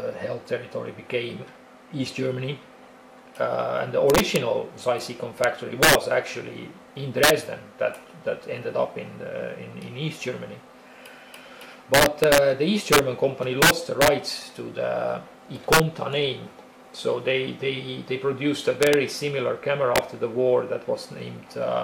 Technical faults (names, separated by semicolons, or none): integer overflow